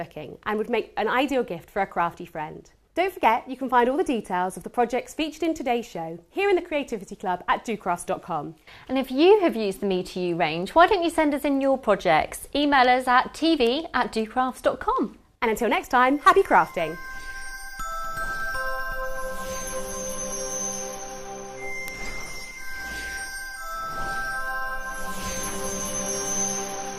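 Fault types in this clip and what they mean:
Word clock ticks: the receiving device runs on its own clock, unlocked from the sender's, so a single sample slips at each clock crossing. Around thirty ticks fall at a steady rate, roughly every 0.7 s, from 0.51 s to 26.81 s.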